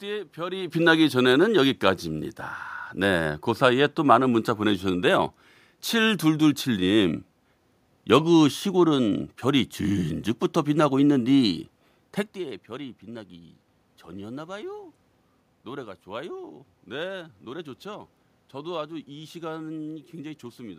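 A speech recording with no technical faults to report. Some background noise from the room is audible, and the level shifts near the start and again around 12 s as the talker moves relative to the microphone.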